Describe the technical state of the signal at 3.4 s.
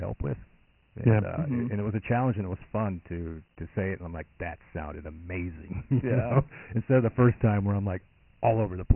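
At 3.4 s the speech carries Dialogic VOX ADPCM coding, as it does for the whole clip. Each sample is stored as a coarse 4-bit step, which fits 6,000 samples a second. Nothing remains above 3 kHz. Heavy gritty hiss trails the speech.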